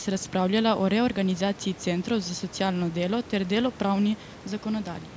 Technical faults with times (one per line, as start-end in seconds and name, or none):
none